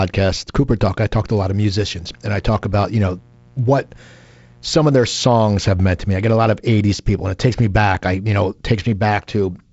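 From 1.40 s to 6.30 s a mains buzz, about 30 dB below the speech, adds a steady raspy edge. Spikes twice per 60 Hz cycle draw evenly spaced horizontal lines at 60 Hz multiples on a spectrogram, reaching several kilohertz, and a regular train of sharp spikes in the waveform's pauses.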